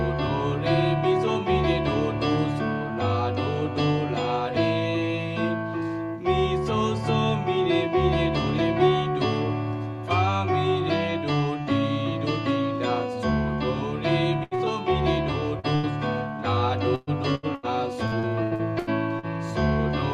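Trouble starts at 14.43 s with a burst of packet loss: about 80 ms went missing, and the receiver stretched the last sound and faded it. You hear a held buzz or hiss, then the audio jumps ahead. Right behind it, at 14.55 s, comes a short concealed packet loss of about 40 ms. The patch blends back in, so it is just a quick smear or wobble. Another one hits at 15.59 s. The bursts keep coming at 15.75 s, 16.95 s, 17.35 s and 17.55 s. Most lose about 80 ms, but the one at 16.95 s drops 120 ms, so its fill hangs on longer before the sound picks up again. From 18.07 to 19.26 s it turns into repeated packet loss with a robotic sound. Six gaps of up to 80 ms each are patched one after another, about a quarter of that stretch is filled in, and the result is choppy with chunks gone.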